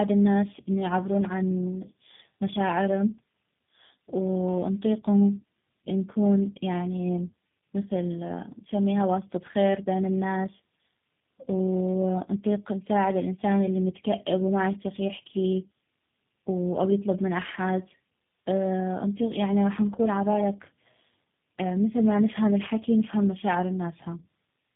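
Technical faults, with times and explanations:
Throughout: tandem speech coding. The speech sounds rough, muffled and warbly, with nothing above 3.8 kHz. This points to two low-rate speech coders in a row, consistent with GSM full rate then G.729A, each re-encoding the previous coder's errors.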